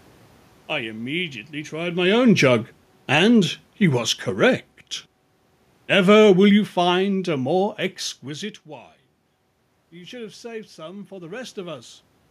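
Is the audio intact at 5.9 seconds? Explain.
No. At 5.9 seconds the clip is inside a stretch of automatic gain falling that runs from about 5.79 to 7.81 s. The gain control judged the input too loud, or its background noise too strong for the gain it started with, and pulled its gain down gradually, by about 6 dB over those two seconds. The level sinks steadily rather than dropping at once, and the room noise underneath sinks with it, which shows the change comes from the system's gain rather than from the talker.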